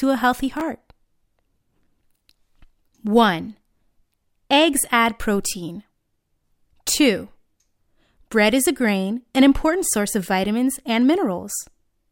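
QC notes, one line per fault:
0.57–0.61 s, chunks out of order: a 10 ms chunk of audio plays three chunks late, after the 30 ms of sound that should follow it, so this short stretch comes out jumbled, with three hard joins where mismatched waveforms meet. Unlike a dropout, there is no silence or missing sound, and unlike a stutter, nothing repeats. The same material is simply rearranged, which is why it sounds scrambled rather than gapped.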